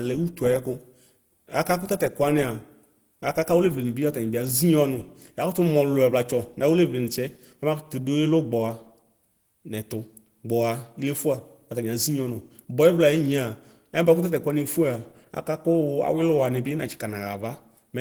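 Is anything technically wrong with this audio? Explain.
Yes. Opus compression damage runs through the whole clip and is plainly audible. The speech sounds muffled, hoarse and grainy. The likely cause is a low bitrate, around 16 kbps, that pushes the encoder into its hybrid mode, where it fills the upper bands with noise. A spectrogram would show energy reaching about 20.1 kHz, but above the harmonics it is smeared and noise-like rather than cleanly striated.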